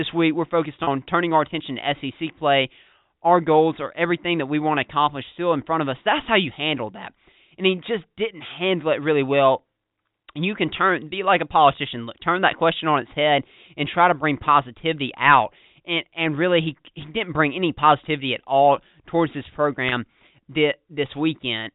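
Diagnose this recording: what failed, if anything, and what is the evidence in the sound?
Packet loss with pitch repetition occurs at the network stage, at 0.84–0.87 s, between "week we're focused" and "turning our attention to", and again at 19.89–19.92 s, just after "at all towards this". Each gap is about 30 ms, which fits a single lost packet. The receiver bridged it by repeating the last pitch period, so the sound briefly holds with a slight buzz. On a waveform, identical cycles repeat. On a spectrogram, harmonics run flat and frozen across the gap.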